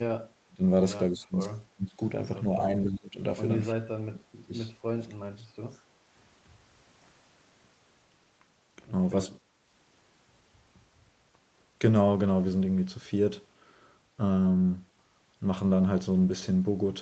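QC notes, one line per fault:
0.47–0.63 s, 1.1–1.39 s, 1.75–2.0 s, 2.61–3.2 s, 3.73–4.53 s, 4.93–5.46 s: speech suppressed in double talk. The speech drops out in six short bursts. The dips reach about 20 to 25 dB early and about 35 dB in the last two. This is likely an echo canceller mistaking the talker for loudspeaker echo while the far side spoke.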